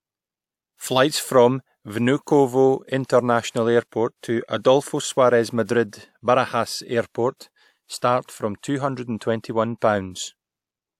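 At 7.98 s, just before a sharp onset in the speech, there is pre-echo lasting until about 8.02 s. The transform codec spread quantisation noise across a whole block, and noise scaled for the loud attack leaked about 46 ms ahead of it into the quiet gap. It sounds like a brief hiss announcing the attack, which itself comes across softened and smeared. On a spectrogram, a faint broadband smear precedes the onset's vertical edge; the waveform shows low-level noise before the transient.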